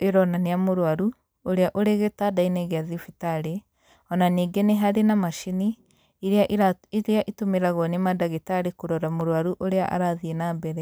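A speech clip with one sharp click at 9.21 s. This is likely dropped samples. A fraction of a millisecond goes missing, so the waveform jumps abruptly.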